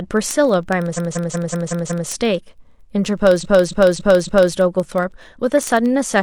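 Speech marred by word clock ticks from 0.13 s to the end: sharp ticks of uneven strength about every 50 ms, around a hundred in all, as an unlocked receiver slips one sample per clock pass, suggesting a clock error of roughly 500 ppm. A spectrogram shows thin, evenly spaced full-band vertical lines. Repeated frames stutter from 0.93 to 2.05 s, where a 185.8 ms block (fitting four frames) plays six extra times, and from 3.39 to 4.52 s, where a 278.6 ms block (fitting six frames) plays four extra times. Each run adds 1.11 s, and the waveform shows identical copied blocks.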